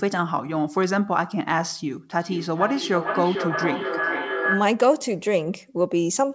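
Feedback echo between two devices runs from 2.2 to 4.91 s. A second device in the same room is playing this call aloud, and its sound reaches the microphone again. The local echo canceller only removes what its own loudspeaker plays, so the returning speech is left in. Each phrase comes back roughly every half second, thinner and more ringing, and the loudest repeat reaches about 4 dB below the direct speech. The audio is band-limited to 8 kHz throughout.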